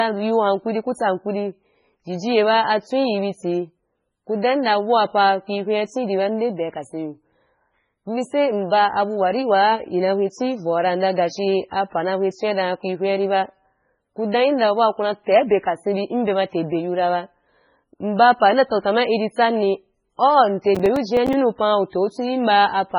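Running through the whole recording, an encoder likely starved of bits by MP3 compression at a very low rate, around 16 kbps, has cut everything above 10.5 kHz and dropped weak detail, so the speech sounds dull, watery and swirly, with smeared consonant onsets.

From 20.75 to 21.34 s, processor overload crackle appears as the system misses a run of processing deadlines, about ten in a row, which fits buffers of roughly 5 ms. Each miss leaves a brief hard-edged gap of silence, and together they form a gritty tearing crackle over the speech.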